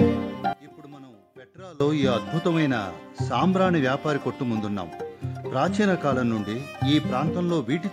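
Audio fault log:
0.53–1.80 s, one channel inverted: the level drops by about 23 dB to a faint residue, likely because one channel's reversed polarity cancels the shared centre content in mono. Unlike a dropout or gain dip, a faint difference signal remains rather than silence or an evenly quieter copy.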